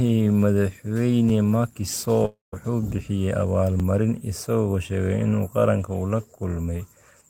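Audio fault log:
2.25 to 2.54 s, long network dropout: The speech cuts out and the last sound is stretched into a fading buzz lasting roughly 270 ms, of which about 160 ms is near-silence before the speech resumes. About 280 ms of the original material never returns; the speech picks up further along rather than where it stopped. This is likely a stall in delivery, with the receiver concealing the gap by extending the last audio it had.
3.80 s, overlapping chunks: A brief stutter or click where about 13 ms of audio plays twice. The audio was handled in 2.5 s chunks, and this chunk began slightly before the previous one finished, so the overlapping piece appears at the end of one chunk and again at the start of the next. The repeated fragment is too short to register as an echo and comes across as a discontinuity at the join.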